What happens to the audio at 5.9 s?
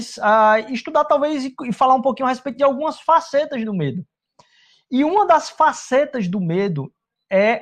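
Nothing goes wrong at 5.9 s; the speech continues cleanly there with no dropout, click or distortion.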